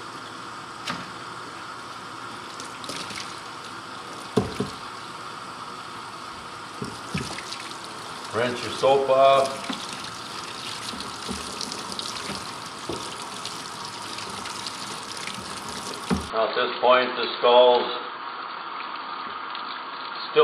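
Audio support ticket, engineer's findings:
Input switched to a poorer device at 16.3 s, running to the end: sound goes dull and boxy, nothing above 4.6 kHz. No gap at the switch, level roughly unchanged. Likely a fallback mic or headset call profile.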